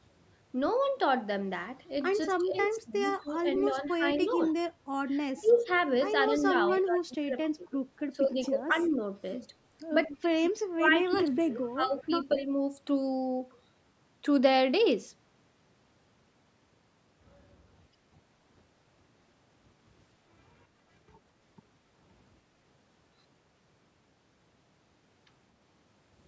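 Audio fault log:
2.22–4.53 s, 5.46–8.90 s, 10.13–10.17 s and 11.11–12.35 s, echo leak: a faint copy of the far-end talker returns 235 ms late, about 20 to 35 dB below the speech, likely because a loudspeaker's output reached its microphone and the echo canceller let it through.
2.42–4.42 s, 5.33–9.00 s and 10.07–12.53 s, speech suppressed in double talk: while both sides speak at once, the talker's level falls in pieces, by roughly 15, 20 and then 30 dB. This is likely the echo canceller turning everything down because it cannot separate the talker from the echo.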